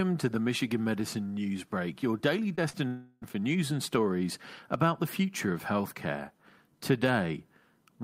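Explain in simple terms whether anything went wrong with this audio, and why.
Right after "your daily", the sound briefly smears and wobbles twice, once at 2.55 to 2.59 seconds and again at 2.69 to 2.75 seconds. These are short concealed packet losses. Tiny pieces of the call, about 20 and 40 thousandths of a second long, arrived too late to be played. The receiver covered each gap by stretching the sound it had just played, then blended back into the real audio.

A longer break follows from 2.87 to 3.24 seconds, just before "for news and stories". The sound turns into a fading buzz or hiss for about a third of a second, then goes briefly silent before normal audio resumes. This is most likely a long network dropout. For roughly 340 thousandths of a second nothing got through, so the receiver filled the hole with an imitation of the last sound, and that stretch of the original audio is lost.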